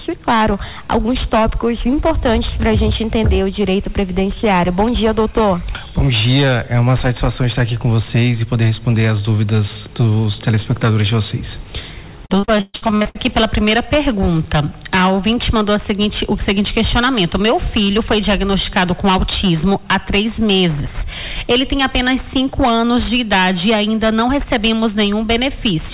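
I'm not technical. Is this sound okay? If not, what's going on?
No. From 12.26 to 13.17 s the sound turns choppy and robotic, with pieces dropping out. This is repeated packet loss: the audio broke up about eleven times in under a second, and each hole was patched by stretching the last sound.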